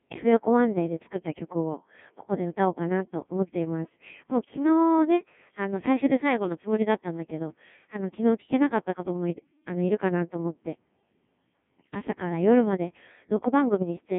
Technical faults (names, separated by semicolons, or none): Codec 2 vocoder